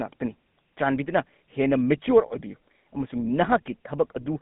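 Throughout the speech, the GSM full-rate codec is plainly audible. The band runs only from about 150 Hz to 3.6 kHz, so the sound is thin and boxed-in. This coder models the vocal tract and drives it with a sparse train of regularly spaced pulses, which fits the 13 kbps full-rate scheme. That coarse excitation leaves a buzzy, gravelly roughness on the voice. The sibilants lose their top end entirely.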